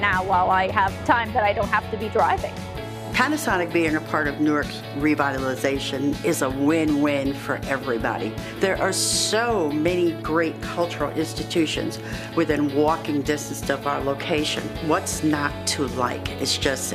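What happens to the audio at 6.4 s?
Nothing goes wrong at 6.4 s; the audio plays through that moment intact, with no dropout, click or other fault.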